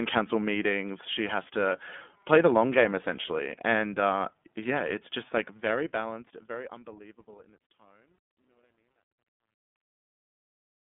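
The iLBC codec is present throughout the whole clip. The speech has passed through a narrowband VoIP coder that encodes each frame's excitation on its own, without leaning on the previous frame. Nothing reaches above 3.7 kHz, and the useful band sits at roughly 200 Hz to 3.5 kHz, so sibilants are dull and the tone is boxed in. The coding damage is plainly audible as a rough, slightly synthetic grain, consistent with iLBC's 30 ms frame mode at around 13.3 kbps.

Truncation distortion on a fade runs from 5.22 s to 10.96 s, during the fade-out that begins around 5 s and ends at 11.0 s. The gain stage doing the fade keeps too few bits and adds no dither, which fits a path of about 11 bits. As the level drops toward the smallest step, the waveform collapses into a handful of square steps. This is worst from 6.83 s to 10.97 s, where the tail turns gritty instead of tapering away cleanly.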